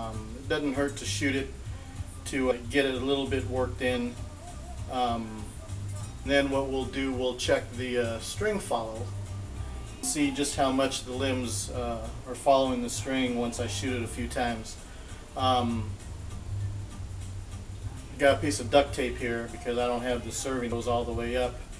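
Sudden jumps forward at 2.51, 6.26, 10.03 and 20.72 s, each marked by a brief blip or click, come from compressed frames skipped; roughly 200, 400, 300 and 200 ms of sound go missing, consistent with 32 ms frames.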